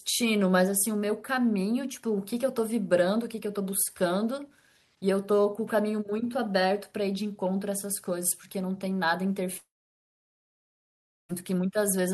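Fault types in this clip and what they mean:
long network dropout: at 9.57 s the speech gives way to a brief fading buzz or hiss, then near-silence holding until 11.31 s, about 1.7 s in all, after which the speech resumes with that stretch simply gone rather than delayed. This is likely a network dropout: incoming audio stopped arriving, the receiver stretched the last sound briefly before it died away into quiet, and playback picked up again from later audio, so the missing 1.7 s is never heard.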